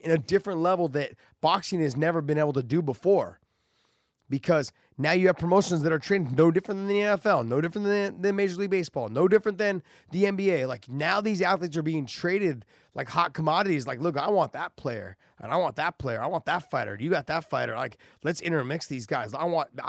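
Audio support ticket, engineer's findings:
No faults found; call path behaving as expected.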